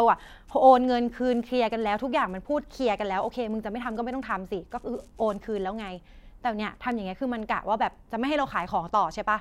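From 0.75 s to 9.23 s, word clock ticks recur roughly every 0.7 s, about ten in all. They are short, sharp clicks over the speech. A digital receiver is running on its own clock, drifting by something like 30 ppm. Each slip drops or repeats a single sample.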